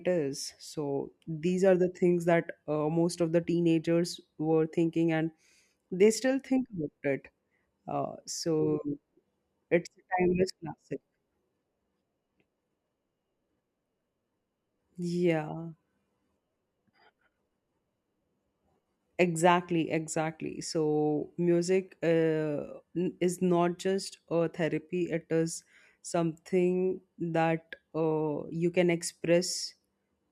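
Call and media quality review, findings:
No faults heard in this speech recording.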